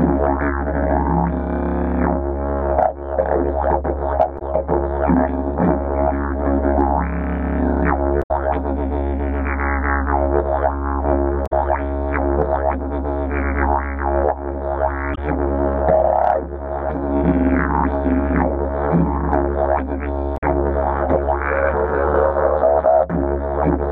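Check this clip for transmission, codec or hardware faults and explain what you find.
The clip shows one fault, repeated five times: damaged data in a compressed stream, at 4.38–4.42, 8.22–8.31, 11.46–11.52, 15.13–15.18 and 20.36–20.43 s. Corrupted bytes make the decoder misread frames and lose sync until it finds the next header, so each spot sounds like a brief chirp, squawk, click or short hole lasting 40 to 100 ms.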